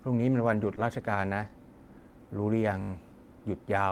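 Speech with two stretches of lost packet rebuilt from error correction, at 0.35 to 0.73 s and again at 0.79 to 0.81 s. Separate lost packets were replaced by low-bitrate copies carried in the following packets, about 200 ms in the first stretch and 20 ms in the second. These rebuilt frames sound rougher and noisier. A spectrogram shows grainier, less defined harmonics there but no gap. Between them, at 0.75 to 0.79 s, is a short concealed packet loss. The receiver filled 20 ms that never arrived by extending the preceding sound, heard as a brief smear or wobble. The waveform looks smooth but slightly too regular, and a spectrogram shows blurred detail rather than silence. A repeated buffer appears at 1.50 to 1.52 s, where one 20 ms block plays twice. It recurs at 2.82 to 2.90 s, where the block plays four extra times. New audio came late, so the device replayed its last buffer, which fits a 20 ms buffer. 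The result is a stutter or short buzz. The waveform shows identical copied segments with hard joins, and a spectrogram shows vertical lines at each seam.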